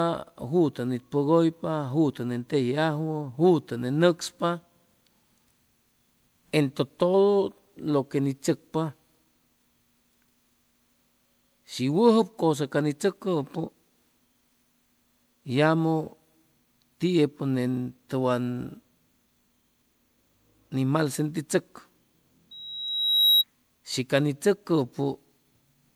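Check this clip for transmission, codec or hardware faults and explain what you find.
Two faults are present: one runs through the whole recording and one is brief.

Throughout, the speech sounds swirly, smeared and hollow, with blurred attacks. Generation loss is the likely cause, consistent with several rounds of MP3 coding at around 128 kbit/s, each adding fresh quantisation noise. A spectrogram would show patchy holes and a ragged upper band.

From 22.51 to 23.44 s, just before "shi ca ni", a loudspeaker feedback squeal appears. A 3.8 kHz tone swells over most of a second to a few decibels above the speech, as the mic–speaker loop gain exceeds one. On a spectrogram it is a bright horizontal line.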